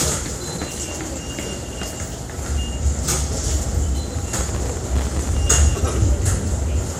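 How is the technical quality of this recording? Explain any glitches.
The recording is marred by a persistent smeared, hollow coloration and two bursts of crackle.

Generation loss, throughout: the sound has a swirly, hollow quality, transients are blurred, and nothing is present above 16.5 kHz. This likely comes from repeated lossy re-encoding, around seven passes through MP2 at about 96 kbit/s. Each pass quantises again on a shifted frame grid, so noise and spectral holes accumulate beyond what one encode at that rate would cause.

Processor overload crackle, from 0.52 to 0.90 s and from 4.04 to 5.37 s: gritty tearing rides on the sound, then stops. The processor fell behind and missed dozens of buffer deadlines, and each miss left a short hard-edged silent gap. The gap length fits a buffer of about 1.5 ms. The second burst is longer but sparser.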